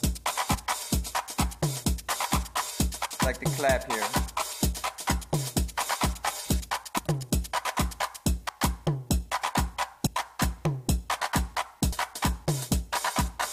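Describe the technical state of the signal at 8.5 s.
At 8.48 s there's a case of compressed frames skipped: a handful of whole frames never got decoded, so the audio jumps ahead by around 100 ms. That's about four frames, which fits a frame length near 23 ms. You hear a sudden lurch at the join.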